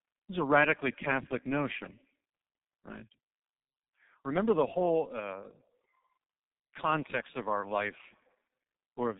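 Tandem speech coding runs through the whole clip: the speech passed through two low-rate speech codecs in a row, and the sound fits a G.729A stage at 8 kbit/s feeding, through a G.711 link, into G.723.1 at 6.3 kbit/s. The second coder had to model audio that the first had already degraded, so the errors stack. The result is rough, muffled and warbly, with nothing heard above 3.8 kHz.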